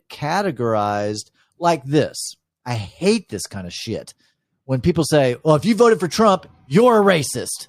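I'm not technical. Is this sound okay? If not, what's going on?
Yes, nothing in this recording points to a technical fault in how the signal was captured, carried or saved.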